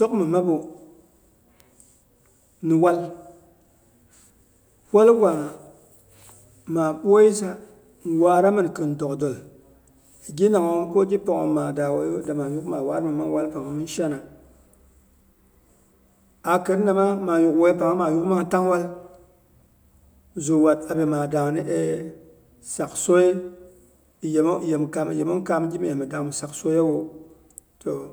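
A single sharp tick sounds at 1.60 s, broadband and unrelated to the speech around it. This is a bit error spike: one flipped bit knocked a lone sample far from its true value, peaking around -22 dBFS, before the signal returned at once.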